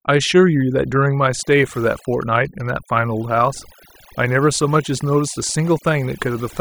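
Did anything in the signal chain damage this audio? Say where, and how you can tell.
Yes. There's overdone noise removal at the call processing stage, across the whole clip. The background drops and breaks up into twinkling specks. The reducer is pulling bands near its noise estimate too far down, taking the quieter parts of the voice with them.

GSM signalling bursts get into the analogue wiring from 1.98 to 2.71 s as a galloping dit-dit-dit of short buzzes at 217 Hz, roughly 25 dB under the speech. A nearby 2G phone is sending signalling bursts, and the circuit rectifies them into audio.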